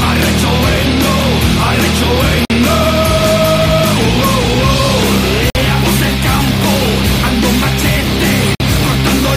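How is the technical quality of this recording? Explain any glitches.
Three short dropouts break up the recording, at 2.45, 5.5 and 8.55 s. Each is a gap between chunks: a 50 ms hole of silence, recurring every 3 s. The audio arrives in 3 s pieces, and playback pauses briefly at each join before continuing without losing anything.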